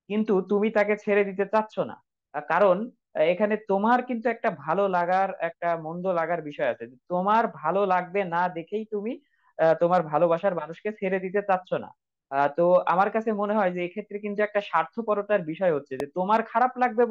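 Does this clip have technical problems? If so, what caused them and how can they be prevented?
Yes. A single loud pop sits on the speech from 16.0 to 16.02 s, a short thump rising well above the level of the voice while the speech carries on underneath without a gap. Unlike a digital dropout click, nothing is missing from the sound, and unlike clipping it is one added pulse rather than flattened peaks. It is likely a voltage spike from a plug, switch or static discharge entering the chain. Seat connectors firmly and mute or power down before switching.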